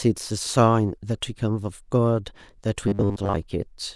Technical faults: robotic sound from repeated short buffers

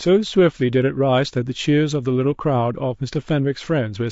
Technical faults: low-delay AAC compression

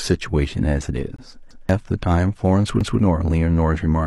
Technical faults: gap between stream segments; repeated buffer

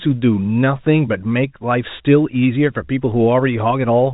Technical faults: none

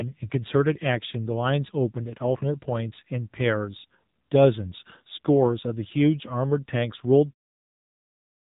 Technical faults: AMR narrowband mobile codec

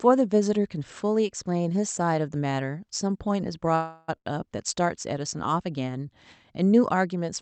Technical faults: call audio freeze; short stall from a late packet

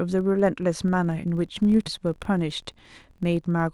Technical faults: filter restarted on every block; damaged data in a compressed stream

